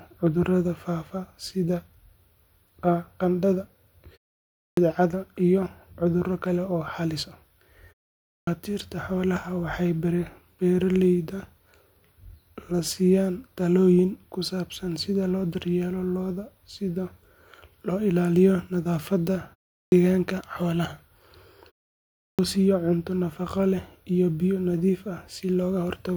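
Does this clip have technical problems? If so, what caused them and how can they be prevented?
Yes. There is a clipped start after a pause at 4.66, 8.34, 19.79 and 22.26 s. Each time, the first 113 to 133 ms of speech is missing after a gap of 0.32 to 0.63 s. The output device sleeps during silence and wakes too late. Disabling the device's power saving keeps it active through pauses and prevents this.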